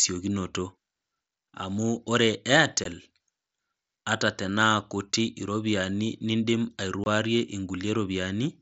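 At 2.84 s, and again from 7.04 to 7.06 s, unconcealed Bluetooth headset packet loss cuts out the speech for about 15 ms and 22.5 ms, which fits two and three lost mSBC packets. Unlike concealed loss, nothing fills the gaps, so their edges are abrupt.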